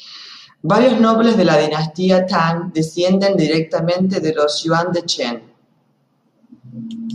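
A speech recording with nothing technically wrong to report. No dropouts, distortion or timing problems turn up anywhere in it.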